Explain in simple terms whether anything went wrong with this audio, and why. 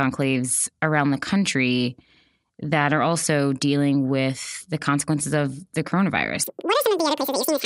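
From 6.44 s until the end at 7.65 s, the speech suddenly runs twice as fast and sounds a full octave higher. That is a wrong sample rate: the audio plays at double its intended speed, which fits 24 kHz material played back at 48 kHz.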